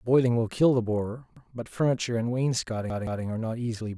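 At 1.37 s the speech stutters. A stretch of about 171 ms plays once, then plays again straight away, and there is a hard join where the repeat begins. This is a repeated buffer. New audio did not reach the output in time, so the device played its last block again. The length fits a 4096-sample buffer. At 2.90 s the same fault returns. This time the block plays three times in a row, a longer stutter lasting until 3.24 s.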